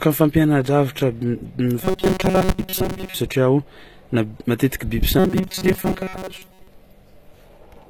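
Likely HE-AAC compression at a low bitrate, around 24 kbps, rebuilds the treble from copied lower bands, leaving gritty, lispy sibilants throughout. From 1.83 to 3.15 s, and again from 5.19 to 6.67 s just after "matetiky biby", audio likely arrives too seldom, so roughly 5 ms buffers repeat and replace most of the sound. This produces robotic sound from repeated short buffers: a rigid metallic buzz at 188 Hz.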